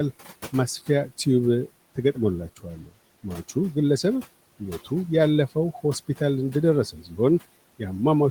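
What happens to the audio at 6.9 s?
From 6.92 to 7.18 s, the noise suppressor cuts into the speech. It mistakes a soft stretch of the talker for background and pulls it down with the room noise, which otherwise sits about 20 dB under the voice. The level falls by about 11 dB at its deepest, over roughly a fifth of a second, so the sound turns faint and swallowed. Unlike a dropout, the signal never goes silent. It is muffled and dimmed, not missing.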